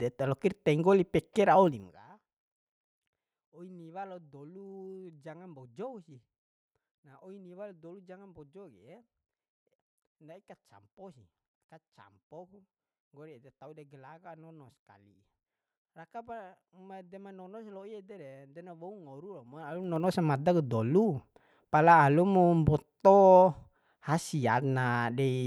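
A speech recording with zipper noise in two places, where the gain moves in audible stair-steps rather than a continuous ramp. From 1.64 to 2.0 s the level drops by roughly 25 dB in 3 dB increments at about 30 steps per second, and each jump leaves a small click that produces a ticking rasp. From 19.44 to 20.12 s, between "na wou ngoru" and "samada ku dolu pala", the level rises by a similar amount in 1 dB steps at the same rate.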